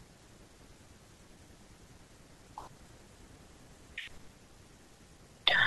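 Listening closely to the speech turned up nothing that stood out as a technical problem at any point.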